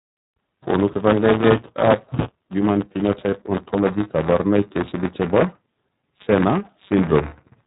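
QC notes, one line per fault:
throughout: buffer tearing. A steady robotic buzz at 200 Hz rides on the speech and vanishes in the gaps between phrases, because it exists only where there is signal to tear. The writer and reader of the output buffer have slipped, so each 5 ms period contains a small splice, a few percent of its length, of audio about 10 ms stale, joined hard on both sides. Unlike a dropout or crackle, the rattle keeps a fixed pitch whatever the speaker does.
throughout: iLBC codec. The speech sounds narrowband, with nothing above about 3.8 kHz, and carries a plainly audible rough, synthetic grain. iLBC codes each frame's excitation independently instead of predicting from the previous frame, so small discontinuities recur at the frame rate. The texture fits 30 ms frames, which suggests the 13.33 kbps mode. A plain low-pass filter would dull the sound without adding this graininess, and here the roughness follows the speech content rather than sitting at one fixed pitch like the tearing buzz.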